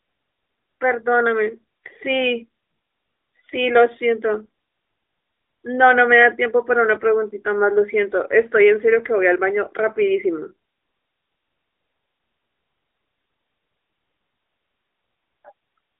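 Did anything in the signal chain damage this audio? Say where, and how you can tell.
Yes. The codec stage is at fault, and the damage runs through the whole clip: this speech has passed through the AMR narrowband mobile codec. Nothing reaches above 3.7 kHz or below 300 Hz, and the voice carries a plainly audible buzzy, synthetic edge, which fits a mid-rate mode of around 10 kbps. A simple telephone-band filter would only dull the sound. The buzz comes from the vocal-tract model and sparse pulse excitation rebuilding the speech frame by frame.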